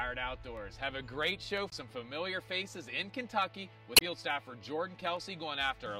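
Sharp single clicks at 0.57, 1.57, 2.87 and 5.17 s, each a thin vertical line across the spectrum, are likely dropped samples, where a fraction of a millisecond is skipped and the waveform jumps.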